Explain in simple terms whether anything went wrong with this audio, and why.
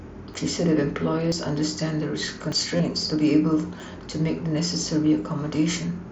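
The speech jumps at 0.34, 1.32, 2.52 and 3.80 seconds. Each is likely a dropped buffer (overrun). The program fell behind, and a slice of sound was thrown away: a few tens of milliseconds, up to about 70 ms at 2.52. The two edges were joined with no gap.

Just after that, from 2.77 to 2.80 seconds, there is concealed Bluetooth headset packet loss. Bits of sound between the headset and the phone went missing. The receiver covered the gap of about 22 ms by repeating the sound just before it. This fits three short packets. The patch sounds like a brief buzzy tone, with a small warble where the real speech returns.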